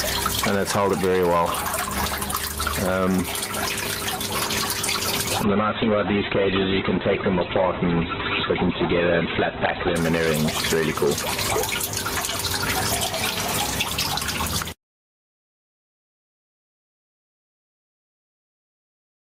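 Hard clipping runs from the very start to the end. The signal is pushed about 11 dB past what the stage can pass, so a few percent of the samples have their peaks sheared flat. Those flat tops throw harmonics high into the spectrum, and the effect is a harsh fuzz riding on every loud moment rather than the odd isolated crackle.

Gain pumping is also present throughout. The gain ducks under each loud sound, with the level moving by something like 10 dB. Loud and quiet passages sit much closer together than they should, and the sound feels squashed and breathing. The likely cause is a microphone gain set far too high, with a fast limiter or compressor clamping down on every peak.

A call bitrate drop begins at 5.45 s and lasts until 10.03 s. The connection's bandwidth estimate collapses, and the encoder is forced from what sounds like around 48 kbps down to roughly 8 kbps. It stays at that floor for about 4.5 s. 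At that rate the codec quantises coarsely, and the audio band is cut from 20 kHz to 4 kHz. The sound turns muffled and rough-edged, with a watery graininess, until full quality returns at 10.03 s.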